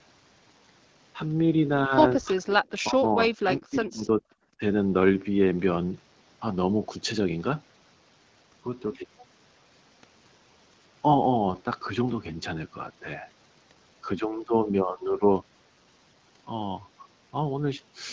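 Speech suppressed in double talk occurs at 2.36–2.47, 2.83–3.04, 3.26–4.01 and 4.18–4.22 s. The speech drops out in pieces, by about 35 to 40 dB and only lightly at the last. It is likely an echo canceller muting both sides while they talked at once.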